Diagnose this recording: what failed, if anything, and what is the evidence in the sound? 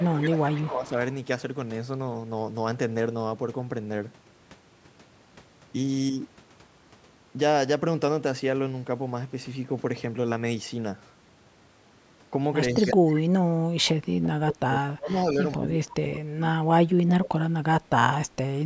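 Echo leak in the call processing. A faint delayed copy of the speech trails the original by 134 ms at 0.0–0.08 s, 0.53–0.89 s, 12.76–13.2 s and 15.25–15.58 s, sitting roughly 15 to 25 dB down. That's likely a loudspeaker echo the canceller didn't fully remove.

Speech suppressed in double talk, also in the call processing. At 0.0–0.93 s, 12.75–13.88 s and 14.21–17.95 s the talker's level sags, by around 30 dB at worst, while the other side talks. That's likely the canceller, unable to separate talker from echo, turning both down.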